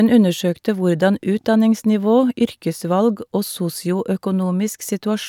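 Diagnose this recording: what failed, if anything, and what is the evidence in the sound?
Nothing failed: no stage from capture through playback leaves any audible trace on this speech recording.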